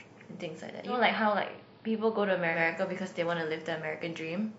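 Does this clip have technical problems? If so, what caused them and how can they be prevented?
Yes. From 0.84 to 2.61 s the speech shows digital radio blending to analogue: over a 143 ms cross-fade it drops to the AM backup, dipping about 1 dB and gaining hiss roughly 35 dB down. The rising hiss distinguishes it from a simple low-pass step. Better reception or a fixed digital-only setting prevents it.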